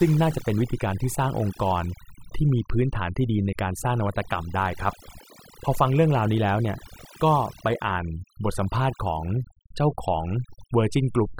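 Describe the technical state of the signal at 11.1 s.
At 11.1 s the speech still carries overdone noise removal, present throughout the clip. An over-aggressive noise reducer switches off frequency bands lying near its noise estimate, taking quiet voice detail with them. The background drops and breaks up into twinkling specks. A spectrogram shows isolated bright flecks scattered over an almost empty floor and ragged, patchy harmonics.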